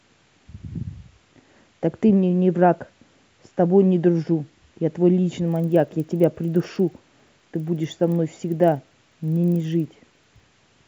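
From 5.48 to 10.4 s the resampler restarts on every block, converting each 40 ms chunk without its neighbours. Each block edge gets a small error, so the speech carries a steady 25 Hz ticking buzz that is present only while sound is present.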